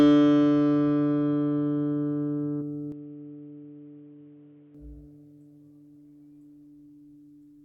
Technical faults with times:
2.60 damaged data in a compressed stream
2.92-4.75 input switched to a poorer device

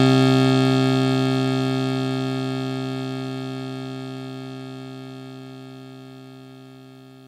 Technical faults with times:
none

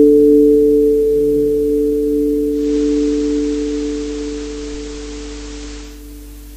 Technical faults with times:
0.00-6.56 mains hum
2.47-6.05 digital radio blending to analogue

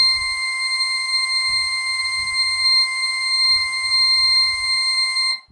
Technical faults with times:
0.00-5.52 low-bitrate audio saved at a high bitrate

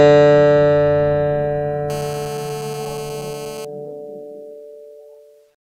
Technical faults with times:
1.90-3.65 GSM phone buzz

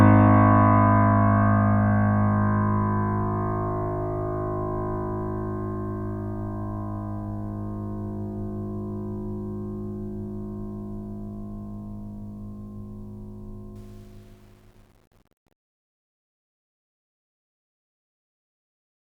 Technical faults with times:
13.76-19.12 truncation distortion on a fade

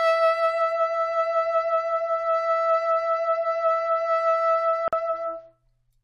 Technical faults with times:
4.88-4.93 gap at a join of encoded pieces

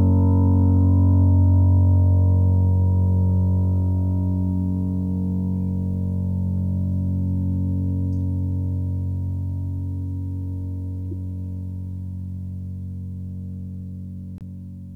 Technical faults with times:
11.11 corrupt frame decoded
14.38-14.42 corrupt frame decoded

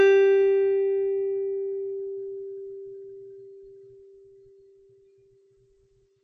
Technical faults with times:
0.00-6.24 MP3 compression

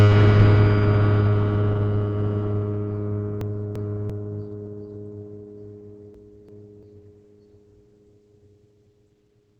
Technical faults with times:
0.00-9.60 Opus compression
3.41-4.10 chunks out of order
6.14-6.83 chunks out of order

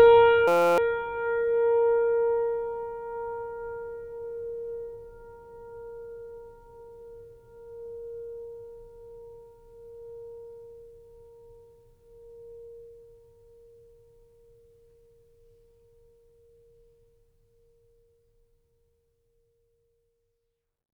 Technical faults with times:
0.48-0.78 system hang loop

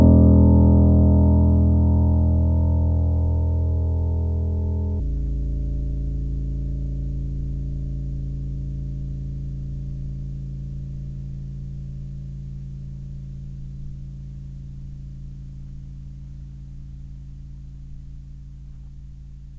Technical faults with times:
5.00-19.59 wrong sample rate

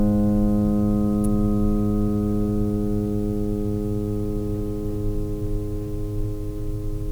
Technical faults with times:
1.24 electrical switching spike

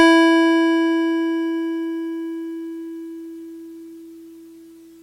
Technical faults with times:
none

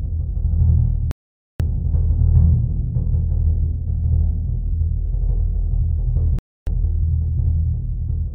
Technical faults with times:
1.11-1.60 Bluetooth stall
6.39-6.67 Bluetooth stall

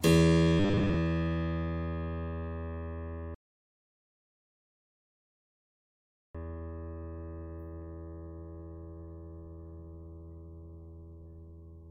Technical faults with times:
0.59-0.97 robotic sound from repeated short buffers
3.35-6.35 rebuffering stall

